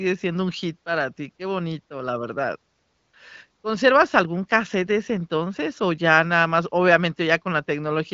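No technical faults can be heard in this speech.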